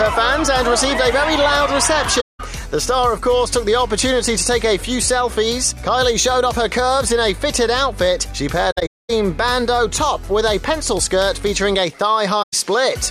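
The audio drops out three times, and each gap is AAC frame loss with muting. Lost frames were replaced with silence. The overlapping decoder windows fade the sound out and back in, so the holes are soft-edged. The first gap runs from 2.20 to 2.40 s. The second spreads across 8.71 to 9.10 s as broken fragments, with the longest gap about 0.2 s. The last runs from 12.42 to 12.54 s.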